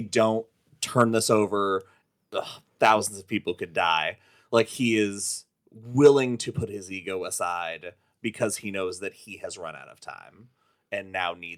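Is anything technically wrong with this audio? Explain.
Yes. At 0.99 to 1.02 s, 2.84 to 2.91 s and 6.05 to 6.08 s the loudest speech peaks turn harsh and crackly, overshooting by about 2, 4 and 3 dB. This is likely microphone overload: input gain drives peaks past the converter's ceiling, flattening their tops, heavily in the third burst.

At 6.63 s speech and background both drop suddenly by about 3 dB, just after that last distorted peak. This points to a microphone volume stepped down, likely software reacting to the clipping by cutting the device's input level in one jump.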